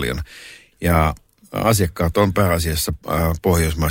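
No technical faults occur anywhere in the speech.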